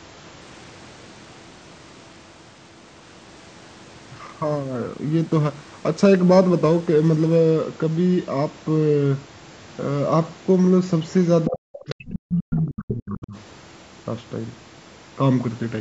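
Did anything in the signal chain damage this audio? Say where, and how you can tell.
Yes. Two faults, both in the call processing stage. The echo canceller is the likely source of each.

Other side's voice leaking through: a second voice that is not the talker's own appears twice. It is a very faint scrap, about 30 dB under the speech, at 11.07 to 11.13 s, and a far stronger stretch at 11.73 to 12.43 s, nearly level with the talker. The loudspeaker signal was picked up by the microphone and the canceller left too much of it. It differs from room reverberation because it is separate speech and not a decaying tail of the talker's own voice.

Speech suppressed in double talk: between 11.46 and 13.36 s the talker's level collapses, by as much as roughly 40 dB at the deepest, for about a second and a half in total. The suppression overlaps the leaked voice at 11.73 to 12.43 s, so the canceller met both sides talking at once and turned everything down. 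That link to the other voice separates it from network packet loss, which leaves gaps unrelated to the far end. The 8 kHz band limit throughout is ordinary call bandwidth.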